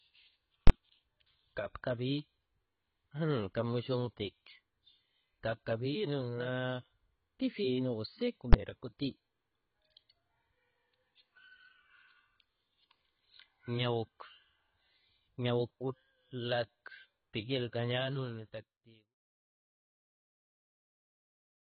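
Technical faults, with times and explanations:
Throughout: AAC compression. Heavy smearing, a dull tone and nothing above 6.1 kHz point to AAC-LC near 16 kbps as the likely cause.
0.67–0.70 s and 8.53 s: invalid numbers at full scale. Output pinned flat at one extreme value, far beyond the audio's peaks; the 23 ms block pops at both edges, the 12 ms block gives one bang.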